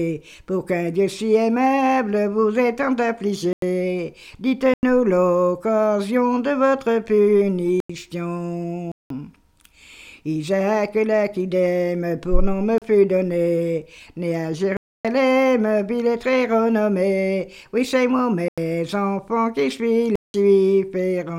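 The audio drops to a block of digital silence eight times: 3.53–3.62, 4.74–4.83, 7.80–7.90, 8.92–9.10, 12.78–12.82, 14.77–15.05, 18.48–18.58 and 20.16–20.34 s. Most gaps last 93 or 186 ms, which fits a 4096-sample buffer left unfilled once or twice in a row. The program likely missed its deadline. The hard cut to silence, with no fade or filler sound, distinguishes these from a fade dropout or concealed packet loss.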